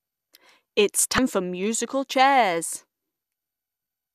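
Damaged data in a compressed stream at 1.15 to 1.18 s, just before "for musical chairs": corrupted frames throw the decoder out of sync, producing a brief glitch as it hunts for the next valid header.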